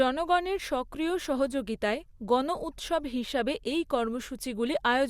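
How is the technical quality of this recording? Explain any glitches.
No dropouts, clicks, distortion or other glitches are audible anywhere in this recording.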